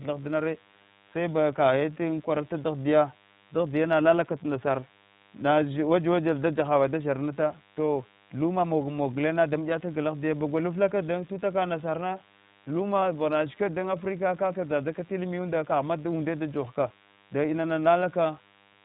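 DECT cordless phone buzz runs from start to finish. A nearby DECT handset or base transmits a radio burst every 10 ms, and the audio circuitry rectifies it into a thin, steady 100 Hz buzz rich in harmonics. It sits roughly 30 dB below the speech.

The iLBC codec also colours the whole clip. This narrowband VoIP coder encodes each frame's excitation independently and passes nothing above 4 kHz. The speech sounds clear but slightly rough and synthetic, with plainly audible damage that fits the 15.2 kbps mode with 20 ms frames.

Lost iLBC frames cause a brief gap from 13.00 to 13.03 s, just before "vaglana shikwat dan africa". One packet's worth of audio, about 20 ms, went missing. The decoder filled it by repeating the last pitch cycle with added noise, which sounds like a short, faintly buzzy held vowel. The speech recovers immediately afterwards.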